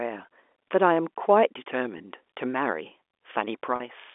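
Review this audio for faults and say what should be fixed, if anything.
Packet loss with pitch repetition occurs twice in this speech, at 1.98–2.00 s and at 3.76–3.80 s. The first gap is 20 ms, which fits one lost packet. The second is 40 ms, which fits two consecutive packets. Each time, the receiver fills the hole by looping the last pitch period, so the sound briefly freezes into a held, buzzy tone before normal speech resumes. On a spectrogram, the harmonics run perfectly flat across each gap, within the 300 Hz to 3.5 kHz telephone band. In the waveform, identical repeated cycles replace the natural variation.

To prevent it, reduce packet loss on the network path (for example with QoS prioritisation) or add forward error correction or redundancy so that lost packets can be rebuilt.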